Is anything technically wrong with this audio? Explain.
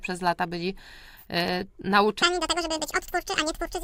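Yes. From 2.22 s to the end, a section at the wrong speed plays 1.81 times too fast, likely from a wrong playback clock, so the sound turns hurried and rises about ten semitones.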